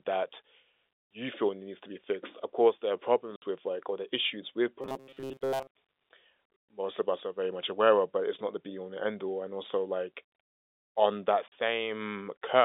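Packet loss filled with silence cuts this telephone-band speech recording at 3.36 to 3.42 s, just before "with like or the", and at 11.48 to 11.52 s, right after "on that". The gaps last 60 ms and 40 ms, which fits three and two lost 20 ms packets replaced by digital silence, with hard edges. Robotic sound from repeated short buffers runs from 4.82 to 5.67 s, following "or the issues with". The speech turns into a rigid metallic buzz locked at 134 Hz. The likely cause is the receiver looping a roughly 7.5 ms stretch of old audio because new audio arrived too late, so much of that passage is skipped. The G.711 line coding keeps everything inside the narrow 300 Hz to 3.6 kHz telephone band.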